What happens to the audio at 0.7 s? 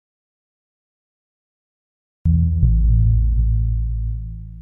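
At 0.7 s the clip is inside an audio dropout to silence that is already under way when it begins and lasts until about 2.26 s. The input was likely lost while zeros kept being written, so unlike a quiet passage or gated pause, no room tone remains.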